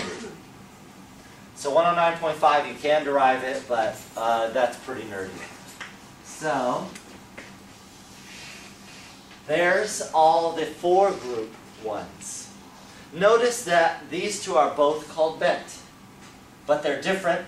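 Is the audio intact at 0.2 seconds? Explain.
Yes, the audio is intact at 0.2 seconds, with no dropout, click, distortion or other fault at that point.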